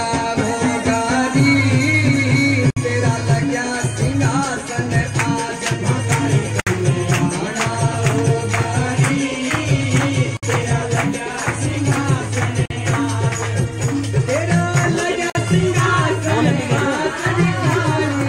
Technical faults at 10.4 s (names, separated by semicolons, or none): gap at a join of encoded pieces